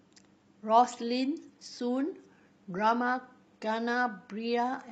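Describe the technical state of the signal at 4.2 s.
At 4.2 s the speech is inside a stretch of adaptive stream at a lower bitrate. It runs from 0.90 s to the end of the clip. The stream switched down to a cheaper version of the audio without any gap. The change at 0.90 s is sudden. Treble sounds synthetic, as if rebuilt rather than carried. Codec artefacts are stronger. This fits a switch from a full-band AAC stream to a low-rate HE-AAC stream of around 20 kbit/s.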